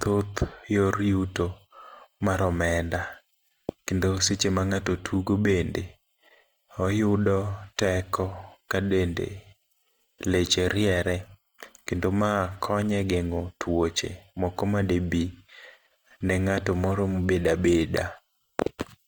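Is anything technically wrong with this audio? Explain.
Yes. Throughout the speech there is plainly audible Opus compression damage, likely from a low bitrate around 24 kbps. The codec refills starved bands with folded or noise content, so tones turn rough and grainy rather than swirly as with MP3, and the full bandwidth to about 20.2 kHz remains.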